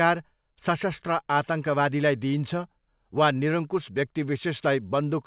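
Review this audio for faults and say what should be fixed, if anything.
No faults found in this speech; nothing needs fixing.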